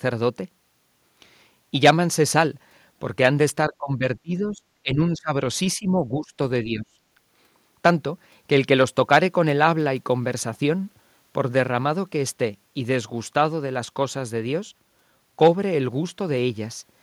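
From 3.66 to 6.96 s, speech drops in five bursts: 3.66, 4.22, 4.83, 5.76 and 6.64 s. Most last about a third of a second, the one at 5.76 s about half a second, and the voice falls by up to about 30 dB. This is likely speech suppressed in double talk, with the echo canceller ducking the talker while the far side spoke.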